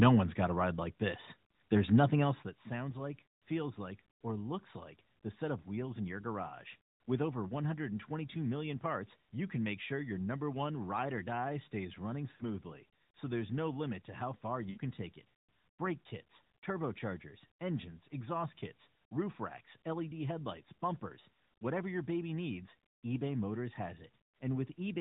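From 2.20 to 2.57 s, just before "sounds like feels like", the level drops by roughly 10 dB, and the move is audible as zipper noise: a fine ticking rides on the sound while the gain falls. The change is being applied in small unsmoothed steps, a couple of hundred per second, and each step leaves a tiny click. A smooth fade would be silent. Here the buzz lasts only as long as the level is moving.

At 12.32 s, right after "or die stays running", about 80 ms of lost AMR speech frames cause the sound to smear and sag toward silence. That fits four missing 20 ms frames, which the decoder papered over by repeating the last good pitch and vocal-tract settings at falling gain. A second, 60 ms gap at 14.70 s falls between "limit to how far" and "take it". Unlike a hard dropout, the sound stretches and fades rather than cutting off cleanly, then returns briefly rough.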